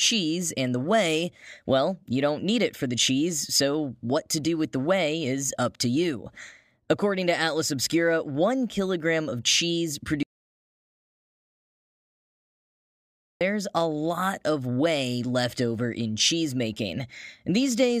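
At 10.23 s, after "one kilogram of cheese", an audio dropout to silence begins. The input was likely lost. Silence runs 3.18 s until "a lot of whey".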